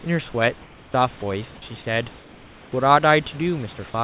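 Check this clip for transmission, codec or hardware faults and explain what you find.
Two transmission faults turn up, both from the sender's voice detection, heard through a narrowband call path whose sound stops at 4 kHz, which fits G.711 mu-law telephone coding.

Comfort noise in place of the background appears from 0.62 to 0.94 s and again from 2.18 to 2.72 s. The sender likely stopped transmitting during pauses, and the receiver synthesised a noise floor. The room's own background, about 26 dB below the speech, gives way to a flat, featureless hiss about 2 dB and then about 3 dB quieter.

Sound dropped by the voice detector occurs at 1.20 to 1.22 s. The detector likely mistook the sound there for background and halted sending, so 20 ms of speech is replaced by the same steady synthetic noise, a brief gap before the speech returns.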